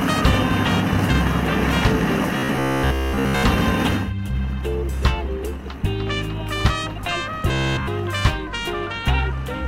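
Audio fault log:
2.38–3.43 s and 7.49–7.88 s, robotic sound from repeated short buffers. The sound turns into a rigid, metallic buzz pitched at 66.7 Hz. It still loosely tracks the original sound. In the first stretch most of the audio is replaced. In the second, all of it is. A buzz at 66.7 Hz means one chunk about 15 ms long is played again and again. The likely cause is new audio arriving too late, so the last short buffer is repeated while real material is skipped.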